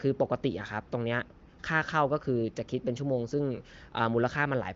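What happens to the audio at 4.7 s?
Nothing goes wrong at 4.7 s: the speech there comes through intact, carried by the AMR wideband (HD Voice) codec working as intended.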